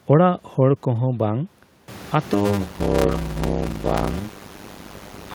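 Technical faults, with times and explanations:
2.33 to 5.35 s, block size mismatch (padded): from here to the end, each block reaching the next stage is only partly filled with audio, and the rest is zeros. That inserts a short silence in every block, heard as a 100 Hz buzz, and the sound runs at about 0.53 times normal speed with its pitch roughly unchanged. The pattern fits 256-sample writes into larger reads. On a waveform, flat gaps recur every 10 ms. A spectrogram shows evenly spaced vertical stripes and a 100 Hz comb of harmonics, separate from the room noise that rises by about 18 dB near 2 s.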